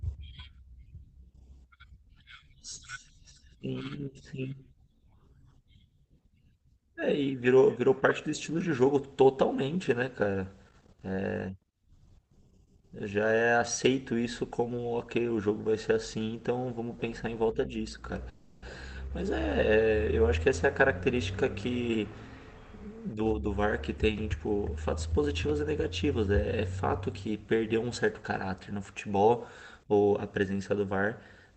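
A speech recording carried over a call path, with coding noise and highs cut above about 8 kHz, consistent with Opus at around 20 kbps. From 18.29 to 18.64 s there is a call audio freeze. The last sound hangs as a fading buzz for about 330 ms, likely because held-up packets emptied the jitter buffer. Nothing is lost; the sound resumes where it stopped. Jitter buffer speed-up follows at 20.87 to 22.04 s, 22.88 to 23.63 s and 24.33 to 25.13 s. Speech runs 108 to 112 percent fast at unchanged pitch, sounding hurried as pitch-period slices are cut to drain the excess delay.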